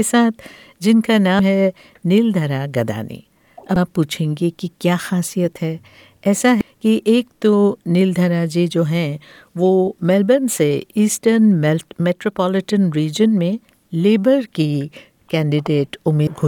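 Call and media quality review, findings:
Damaged data in the compressed stream: short glitches at 1.39, 3.76, 6.61, 9.85–9.88 and 16.27 s. Most are just a few ms, and the one near 9.9 s runs about 24 ms. The decoder hits bad bytes, loses frame sync, and hunts for the next header.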